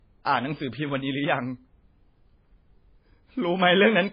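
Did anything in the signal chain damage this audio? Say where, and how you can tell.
Yes, at the codec stage, throughout the speech. Nothing sits above 5 kHz, and the top end has that swirly, smeared quality of a very starved MP3. The file itself behaves like a high-rate encode, so this is likely low-bitrate audio saved at a high bitrate: something like a 16 kbit/s MP3 re-encoded at a generous rate. The second pass can't bring back what the first one threw away, so the cut-off and artefacts just get carried along.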